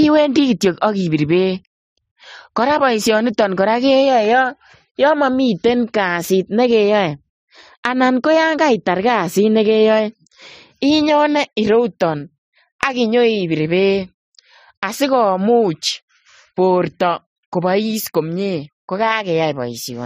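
Across the whole speech clip the top end stops at about 15.2 kHz, with swirly, smeared artefacts layered over a second set of ringing ones. This likely comes from transcoding between lossy codecs, an MP3-like encode re-encoded as AAC-LC, which single-pass compression wouldn't stack.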